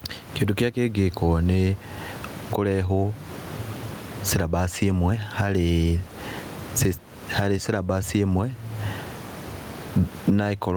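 Throughout, the background swells in pauses and ducks by around 20 dB under louder speech, squashing the dynamics. This is gain pumping, likely from excessive input gain driving a fast limiter.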